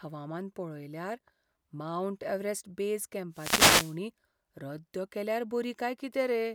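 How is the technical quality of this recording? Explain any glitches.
The recording has one noticeable glitch. A wireless microphone noise hit runs from 3.32 to 3.98 s, right after "मावंट एव्हरेस्ट बेज". The FM radio link briefly fades as reflected signals cancel, so receiver noise rises in a swishing burst of static lasting about two-thirds of a second.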